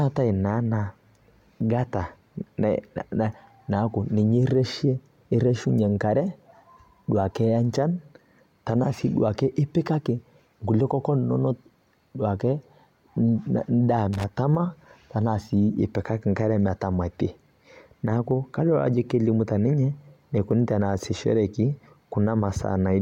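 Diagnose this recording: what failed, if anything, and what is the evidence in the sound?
Loose connector crackle at 14.13 to 14.24 s in the analogue wiring: a worn contact briefly breaking and remaking chops the speech into a short scratchy burst.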